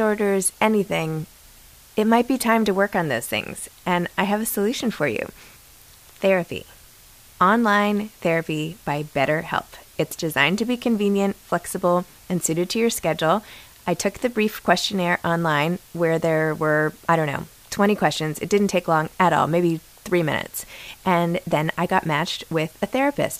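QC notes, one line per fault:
Throughout: low bit depth with dither. The speech sits on a constant, even hiss about 25 dB below its level, with no grainy or gritty distortion on quiet syllables or decays. The audio is carried at only 8 bits. Random dither was added before the samples were rounded to so few levels, which turns the rounding error from signal-dependent distortion into steady broadband white noise. That noise stays put during pauses and under loud passages alike.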